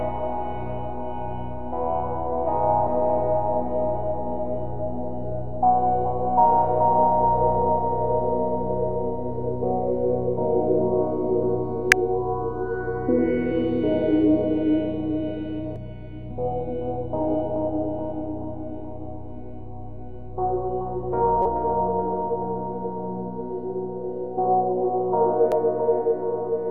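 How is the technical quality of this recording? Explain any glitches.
The recording has damaged data in a compressed stream at 2.86, 11.92, 15.76, 21.42 to 21.46 and 25.52 s. Corrupted frames trip the decoder, causing brief glitches.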